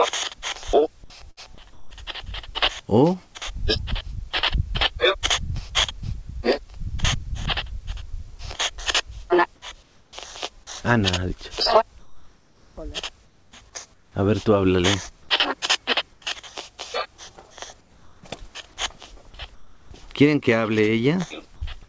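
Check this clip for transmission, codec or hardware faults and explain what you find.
Three kinds of fault turn up, all tied to a voice detector gating the signal. Nothing sits above 8 kHz, which fits a G.722 call path at 64 kbps.

Sound chopped by the voice detector, from 1.31 to 1.91 s. The sound turns choppy here. About 270 ms of it is swapped for a flat fill in short pieces. The likely cause is a detector flipping between sending and muting several times. Each mute hands the gap to synthetic noise.

Comfort noise in place of the background, six times: 11.99 to 12.77 s, 13.25 to 13.52 s, 13.94 to 14.15 s, 16.13 to 16.22 s, 17.81 to 18.23 s and 19.55 to 19.91 s. The background sits about 32 to 37 dB below the loud parts. In each gap it turns steady and featureless. It also drops by about 1 to 4 dB. The sender likely stopped transmitting in the pauses. The receiver then generated shaped noise to fill them.

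Sound dropped by the voice detector, at 21.56 to 21.62 s. A 60 ms stretch gives way to steady noise. About 30 ms of real sound is lost. The likely cause is the detector mistaking a quiet sound for background. It stopped sending, and comfort noise filled in until transmission resumed.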